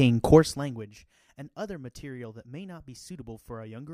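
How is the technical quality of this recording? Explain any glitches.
One glitch: from 0.34 to 0.9 s, zipper noise. The level drops by about 20 dB in 1 dB steps, around fifty per second, each step ticking, unlike a smooth fader move.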